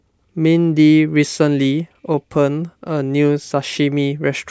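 No technical faults occur in this speech, so there is nothing to describe in time order.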